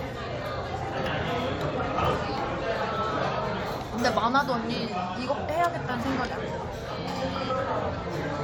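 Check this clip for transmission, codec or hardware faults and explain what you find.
Nothing stood out on listening to these sounds.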